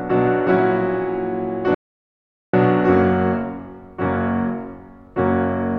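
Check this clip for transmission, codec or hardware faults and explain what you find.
One fault: an audio dropout to silence from 1.75 s to 2.53 s. The music stops abruptly and about 0.79 s is replaced by silence with no background left, likely because the input was briefly lost while recording continued. The music then resumes mid-flow.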